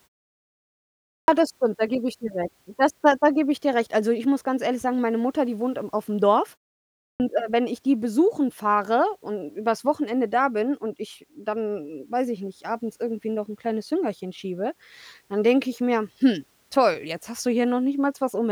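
At 1.15 s, after about 1.15 s of quiet, "das stimmt" starts abruptly, missing its first 130 ms: a clipped start after a pause, with the output device waking too slowly. It recurs at 7.07 s, where "äh wenn ich die" loses about 130 ms after a 0.58 s pause.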